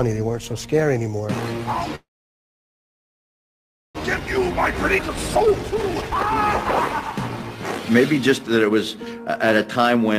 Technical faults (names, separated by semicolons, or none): call audio freeze; jitter buffer speed-up; skip ahead